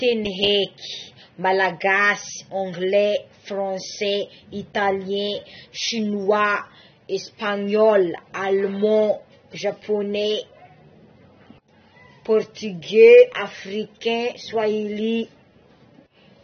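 From start to finish the speech sounds dull, with nothing above about 6.3 kHz and a smeared, warbly fizz on sibilants. That's likely AAC compression at a low bitrate, around 24 kbps, where the encoder drops the top end and coarsely quantises what's left.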